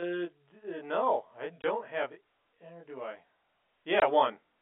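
Channel delay comb filtering runs through the whole clip. One channel trails the other by around 20 ms, and summing them to mono cancels their shared content at evenly spaced frequencies, from about 20 Hz up, giving the speech a rough, slightly doubled sound.

Packet loss filled with silence occurs twice: 1.62 to 1.64 s, right after "no I", and 4.00 to 4.02 s. Each 20 ms gap fits a single lost packet replaced by silence. The speech stops abruptly at hard edges, over the narrow 250 Hz to 3.4 kHz telephone band.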